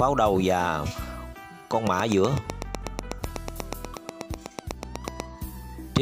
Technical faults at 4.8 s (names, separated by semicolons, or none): train of clicks